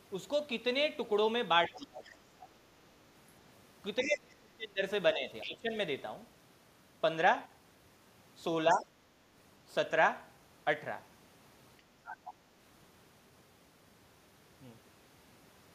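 In this speech recording the talker's voice sinks or breaks up in patches: deeply at 1.68–2.48 s and 4.04–4.82 s (drops of roughly 25–30 dB), more mildly at 5.14–5.26 s, 5.43–5.72 s and 8.73–8.91 s. This is speech suppressed in double talk, likely an echo canceller ducking everything while both sides spoke. A second voice also slips in faintly at 1.76–1.80 s and 3.99–4.08 s and more clearly at 12.05–12.34 s. That is the other side's voice leaking through, likely loudspeaker echo the canceller failed to remove.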